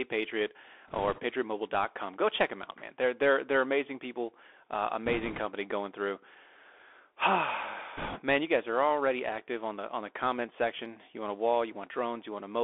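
Speech carried throughout by the Bluetooth CVSD headset codec, heard as a 300 Hz to 3.5 kHz telephone band, which fits the 64 kbps one-bit delta coding of a headset link. On a spectrogram, nothing shows above 3.5 kHz. Loud high sounds outrun the adapting step size, so s sounds turn scratchy, and a grainy hiss sits under the voice. Three bursts of bit errors on the Bluetooth voice link add a rushing crackle at 0.88–1.20 s, at 5.06–5.40 s (after "they're amazing people uh", before "going through") and at 7.97–8.20 s, with the error rate roughly two to four percent, worst in the last burst. Because each flipped bit nudges the signal only one small step and the error fades, the waveform shows a thickened, fuzzy stretch rather than sharp spikes. The spectrogram shows a broadband smear across the band there.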